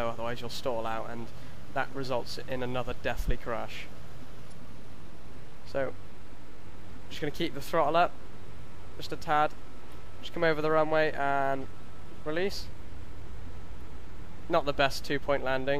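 From 4.48 to 4.52 s the sound briefly breaks up. This is damaged data in the compressed stream: the decoder lost frame sync, then recovered.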